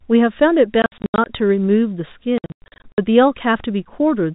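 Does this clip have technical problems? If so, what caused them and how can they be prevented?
Yes. Packet loss filled with silence chops the speech at 0.82–1.26 s and 2.38–2.98 s into hard-edged holes up to 80 and 100 ms long, fitting 20 ms packets. Unlike concealed loss, nothing bridges the gaps. Forward error correction or loss concealment would prevent it.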